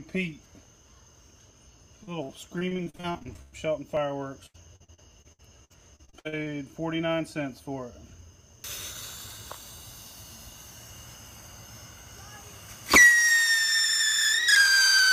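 From 2.03 to 3.54 s, and again from 4.46 to 6.48 s, repeated packet loss gives a robotic sound. Short holes follow one another closely. Each is patched by stretching the last sound, for up to 104 ms and 77 ms. Nearly a third, then over a quarter, is patched. The audio turns choppy.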